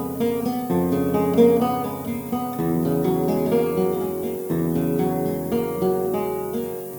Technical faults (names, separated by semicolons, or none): low bit depth with noise shaping